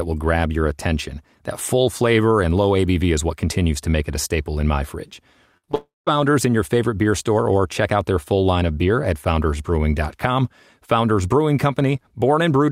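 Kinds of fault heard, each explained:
Burst of packet loss: At 5.57 s about 60 ms goes missing in one go, which fits three 20 ms packets lost back to back. The receiver covers it by stretching whatever sound was last heard and fading it down over roughly 59 ms, so you get a brief held buzz or fading hiss. At 5.65 s the audio picks up again a little further along, and the bit in between is simply gone.
Short concealed packet loss: Right after that burst there are two smaller holes, at 5.65 to 5.69 s and 5.71 to 5.75 s, each about 20 ms of missing audio. The receiver patches each one by continuing the previous sound, following its pitch if it was voiced or using shaped noise if not, then blends back into the real signal. You hear these as quick smears or little wobbles stacked onto the end of the burst.
Long network dropout: From 5.75 to 6.09 s roughly 320 ms of audio never arrives, most likely because the connection stalled briefly. 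The fill stretches the last sound into a buzz or hiss that trails off, and about 200 ms of that stretch ends up plain silence. Then the audio comes back further on, having skipped the lost part. Coming straight after the smaller gaps, it lands as one clear hole in the sound.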